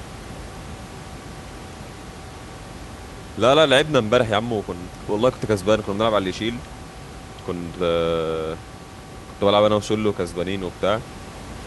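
The speech signal shows no technical faults, with only the room's own background noise audible at about 17 dB below the speech.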